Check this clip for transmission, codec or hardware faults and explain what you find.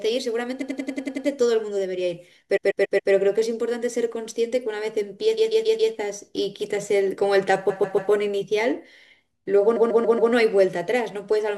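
Repeated frames: the stream resent or rewrote short runs of compressed frames, so the decoder played the same stretch of speech back to back. This happens five times. From 0.61 to 1.26 s, a 93 ms block (consistent with four frames) plays eight times in a row. At 2.56 to 3.11 s, 5.37 to 5.92 s, and 9.75 to 10.31 s, a 139 ms block (consistent with six frames) plays five times. From 7.69 to 8.11 s it plays four times. Each one is heard as a rapid stutter. In total the repeats stretch the speech by about 2.7 s.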